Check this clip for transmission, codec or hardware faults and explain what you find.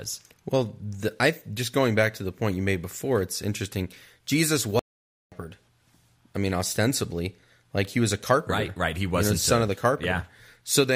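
One fault is audible in this speech clip: an audio dropout to silence from 4.79 s to 5.32 s, lasting about 0.53 s. The speech stops abruptly mid-flow and resumes just as abruptly, and the gap in between is dead silence with no room tone, not a pause. The likely cause is the input briefly going dead, through a loose connection, a failed link or an accidental mute, while recording carried on writing silence. A natural pause or a noise gate would leave some room tone or fade down, and packet-loss concealment would fill the hole with smeared sound; here the background vanishes completely, and whatever was said during that half second is lost.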